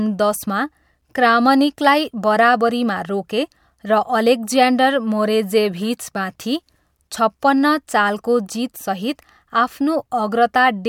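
No audible faults anywhere in the recording; nothing to flag.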